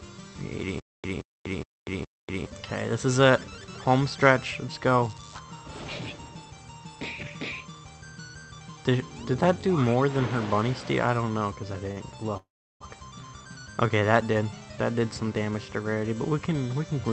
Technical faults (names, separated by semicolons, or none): stutter with silent gaps; short stall from a late packet; call audio freeze